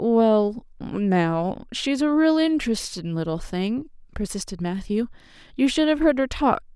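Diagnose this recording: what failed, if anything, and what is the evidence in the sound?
Nothing failed here: the speech comes through without anything in the sound pointing to trouble at any stage of the chain.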